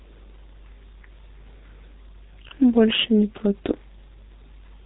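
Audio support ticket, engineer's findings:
G.723.1 codec damage throughout. Muffled, hoarse speech, blurred consonants, nothing above 3.8 kHz. Sound points to 6.3 kbit/s, 30 ms frames; slow voice-model updates smear transitions. Heavy.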